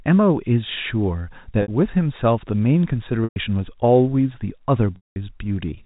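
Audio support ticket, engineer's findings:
Packet loss with pitch repetition, 1.62 to 1.68 s: brief held, buzzy tone, 60 ms. Receiver concealment repeating last pitch period across dropped packets. Gap length fits three 20 ms frames.

Same fault at 3.24 to 3.36 s (120 ms) and 4.96 to 5.16 s (200 ms): repeated period fades to silence, then cross-fades back. Concealment outlasting its roughly 50 ms fade. Band-limited G.711 telephone coding audible throughout, not implicated.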